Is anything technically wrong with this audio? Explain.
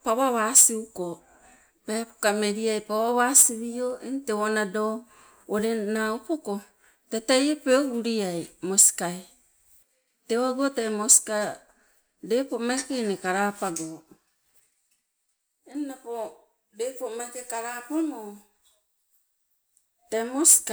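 No, nothing is technically wrong with this audio.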